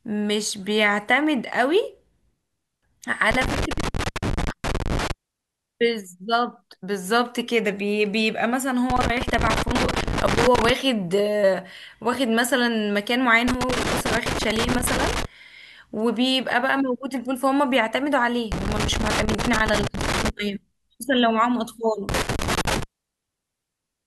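Five bursts of loose connector crackle run through this speech clip: 3.31 to 5.11 s, 8.90 to 10.70 s, 13.48 to 15.25 s, 18.52 to 20.30 s, and a shorter one from 22.09 to 22.83 s. Each is an irregular scratchy crackle lasting close to two seconds, the last under one. That's a worn or dirty contact making and breaking as it shifts, chopping the signal on and off.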